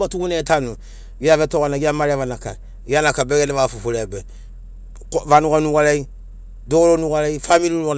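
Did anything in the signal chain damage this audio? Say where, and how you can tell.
No, nothing in the signal chain damaged this audio.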